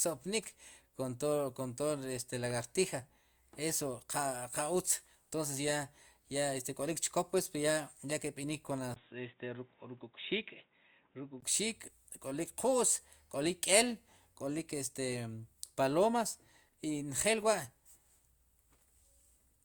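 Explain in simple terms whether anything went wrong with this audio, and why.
From 8.94 to 11.42 s the speech turns dull after a brief gap, likely an input switched to a poorer device; loudness stays the same.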